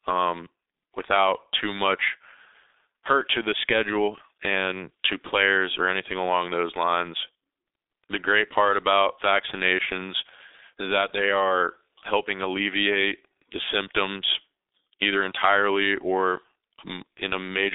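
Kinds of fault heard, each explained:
G.723.1 codec: The speech throughout the clip sits in a narrow telephone band from 300 Hz to 3.7 kHz, with nothing above 3.8 kHz. This early internet-telephony codec works in 30 ms frames. It refreshes its model of the voice slowly. The damage here is heavy. The speech sounds muffled and hoarse, and consonants blur together. The coarse texture points to a very low rate, which fits about 6 kbit/s.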